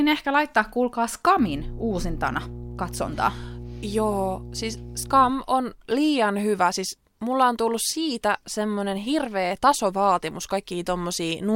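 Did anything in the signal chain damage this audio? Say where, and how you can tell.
Yes. Mains hum enters the speech at the analogue wiring stage, from 1.39 s to 5.30 s, between "ehkä laittaa kuulkaa" and "on liian hyvä siis". A steady low tone sits under the speech at 60 Hz with a few low harmonics. It is fairly loud, about 15 dB below the signal. The cause is power-line coupling, from a ground loop or a nearby transformer.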